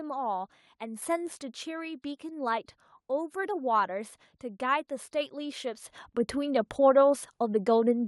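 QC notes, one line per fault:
1.02 s and 2.04 s, microphone volume stepped up: the input level jumps by about 6 dB at 1.02 s, then by about 4 dB at 2.04 s. Each time the speech and the room background rise together, because the gain was raised at the device, ahead of everything else in the chain. Nothing ramps in between. On the waveform the envelope steps up abruptly at each point, and on the spectrogram the whole band, noise floor included, brightens at once.
1.21 to 1.86 s, zipper noise: the level is pulled down by roughly 10 dB in 2 dB steps, at roughly seven steps per second, with no smoothing between steps. Each jump in gain makes a small click, so a ticking rides on the speech while the level falls. The waveform shows a staircase envelope, and the spectrogram shows faint vertical broadband lines at each step.
5.76 to 6.13 s, zipper noise: the same coarse 2 dB stepping, this time raising the level by roughly 10 dB, faster, at roughly ten steps per second, so the ticks come closer together and sound more like a zip. 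The envelope climbs in visible stairs, and narrow broadband click lines mark each step on the spectrogram.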